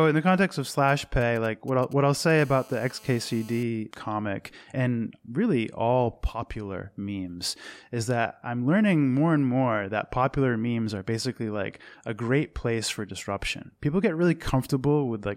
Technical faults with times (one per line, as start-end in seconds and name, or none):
0.74-2.39 GSM signalling bursts
2.39-3.63 GSM phone buzz